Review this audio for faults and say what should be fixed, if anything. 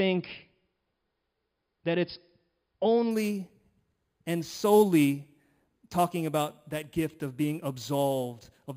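From 3.11 s to the end, the speech takes on a bright, metallic fizz riding on top of it, rising and falling with the speech's level, about 20 dB below the speech itself. This is imaging from sample-and-hold upsampling: each sample was repeated rather than interpolated, so mirrored copies of the speech's spectrum appear above the original band. The lowest copy sits between about 5.5 kHz and 11 kHz and moves opposite to the speech's pitch. The spacing of these copies fits a source at roughly 11 kHz raised to 48 kHz. To prevent it, upsample with a proper interpolating low-pass filter rather than repeating samples.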